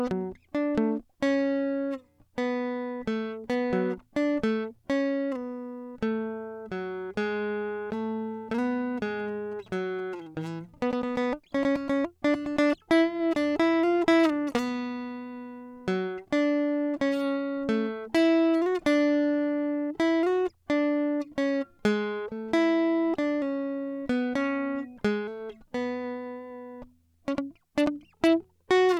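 From 9.05 to 10.15 s, GSM signalling bursts break into the music: a nearby 2G phone's radio pulses are rectified by the audio circuit into a galloping dit-dit-dit of short 217 Hz buzzes, well below the music. Its stuttering grouping sets it apart from steady mains hum.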